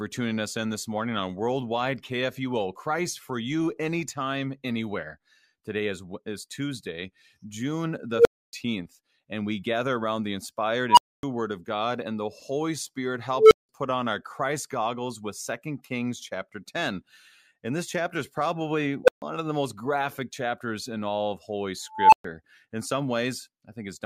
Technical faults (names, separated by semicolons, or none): unstable filter